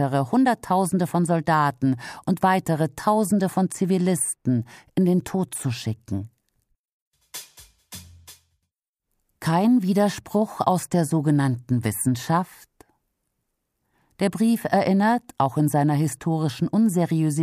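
No technical faults occur at any point in the audio, so there is nothing to place in time order.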